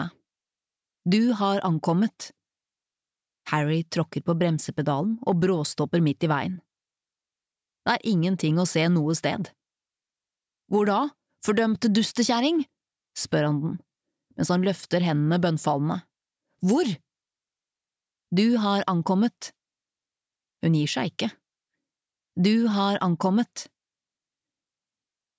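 No technical fault can be heard anywhere in the audio; the signal stays steady and intact throughout.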